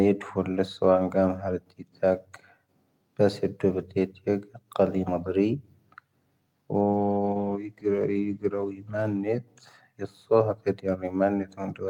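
A call bitrate drop from 6.94 to 9.29 s cuts encoding from 48 to 15 kbps, so the speech turns coarse, watery and muffled before recovering.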